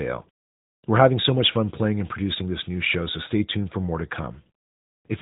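Throughout, the speech carries AMR narrowband mobile codec damage: nothing above 3.8 kHz survives, leaving a buzzy, synthetic quality that fits a mid-rate mode near 10.2 kbps. A spectrogram shows an empty band above the cutoff.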